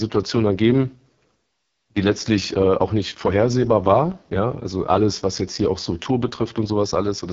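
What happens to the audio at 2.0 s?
At 2.0 s the speech sounds rough and raspy, with nothing above about 7.3 kHz, as it does throughout. This is heavy AMR wideband (HD Voice) codec damage, fitting its lowest 6.6 kbit/s mode, where a sparse pulse model and shaped noise replace detail.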